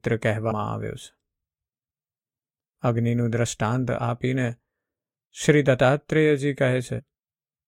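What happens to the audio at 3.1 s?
Nothing goes wrong at 3.1 s; the speech continues without interruption or audible fault at that point.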